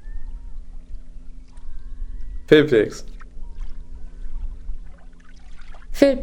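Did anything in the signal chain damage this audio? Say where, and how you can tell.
No, nothing in the chain audibly damaged this audio.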